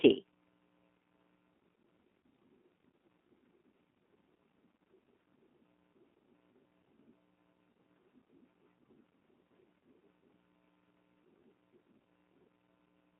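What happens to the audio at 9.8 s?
At 9.83 s a VoIP packet loss concealed by the speech codec drops about 30 ms of audio, which fits a single lost packet. The decoder extrapolates from its last pitch and filter with falling gain, so the speech smears into a brief buzzy tone or coloured noise that fades, and stays weak just afterwards. All of this passes through the G.729 codec, which cuts everything outside roughly 200 Hz to 3.4 kHz and leaves the speech audibly rough and synthetic.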